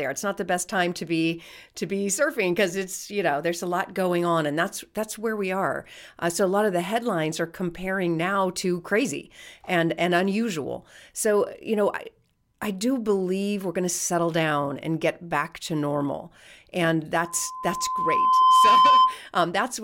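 Right after "back to normal and", at 17.26 s, loudspeaker feedback squeal kicks in: a 1 kHz tone swells over a second and a half, ending 19.19 s, roughly 10 dB over the speech.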